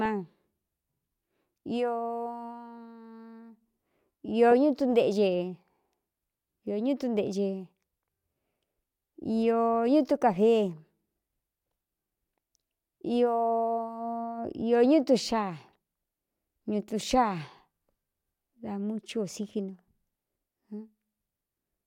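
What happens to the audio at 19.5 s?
Nothing goes wrong at 19.5 s; the speech carries on intact at that moment, with no dropout, click or distortion.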